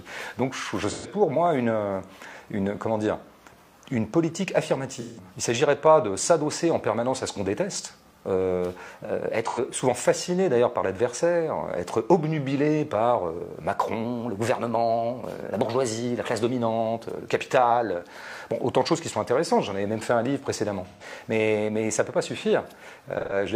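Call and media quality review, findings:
AAC frame loss with concealment: decoder patched dropped frames from the last good spectrum, leaving short smeared, phasey patches at 0.90, 5.00, 9.46, 20.87 and 23.19 s, each roughly 85 to 170 ms, the 5.00 s gap fitting about four frames, the last scattered across 256 ms with a longest run around 150 ms.

Drift correction step: playback rate jumps 6.3%, pitch rising with speed by 106 cents, about a semitone, 8.89 to 9.86 s and 14.05 to 16.42 s, likely a clock-matching resampler draining its buffer, then snapping back.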